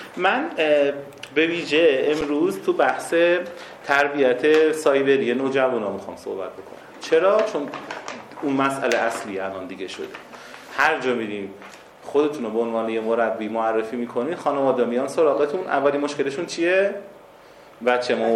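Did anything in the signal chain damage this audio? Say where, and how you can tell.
Yes: an underrun with held sample at the driver/buffer stage, at 2.21 s. The output buffer ran dry for 8 ms and the converter froze on its last value. The waveform shows a short flat line, and the spectrogram a brief dark gap. Playback resumes where it stopped, so there's only a soft edge.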